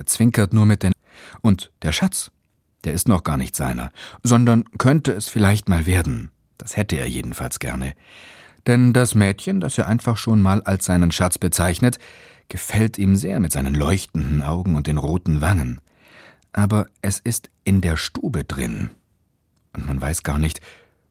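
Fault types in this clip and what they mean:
Skip ahead: at 0.93 s, about half a second of speech was dropped while later audio waited, so playback jumps forward and the two sides join with no gap.
Jitter buffer speed-up: from 1.41 to 3.37 s, the receiver trimmed short pitch-period pieces to shed backlog, running speech at 111% speed with unchanged pitch and cutting roughly a fifth of a second.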